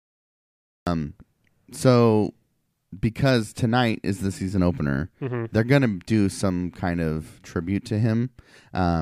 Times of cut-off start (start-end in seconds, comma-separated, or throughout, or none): 0.00-0.87